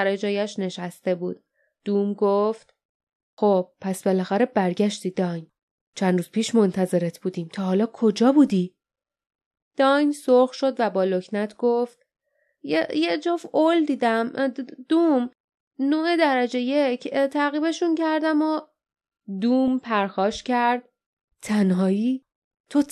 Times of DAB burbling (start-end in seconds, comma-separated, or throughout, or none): 12.94-13.01, 19.68